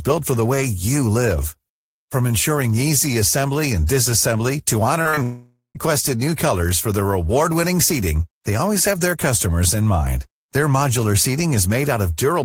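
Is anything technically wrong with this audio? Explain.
Yes. Between 5.01 and 5.19 s there are three short concealed packet losses, at 5.01–5.07, 5.09–5.15 and 5.15–5.19 s. Each gap of 20 to 40 ms is patched by extending the preceding sound, giving quick smears rather than audible holes.

From 5.23 to 5.77 s comes a longer break whose likely cause is a long network dropout. About half a second of audio is missing. A synthetic continuation fades out and ends in roughly 0.13 s of silence, which is far longer and emptier than the brief patches just before it.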